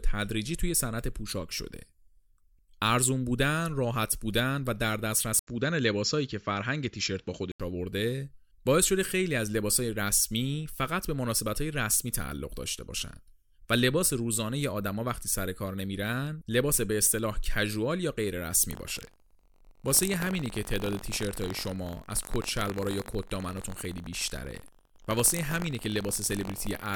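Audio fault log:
5.39–7.60 s, input switched to a poorer device: the sound turns dull and boxy after an 80 ms gap. This is likely a change of microphone. The spectrogram shows the upper band cut away and a new noise floor about 45 dB down, with no clear level step.
18.69–26.96 s, buffer tearing: a robotic buzz at 46.9 Hz, which fits a 1024-sample buffer, runs while there is signal. Roughly 2% of each period repeats audio about 100 ms old. Hard joins appear as evenly spaced vertical streaks and waveform steps.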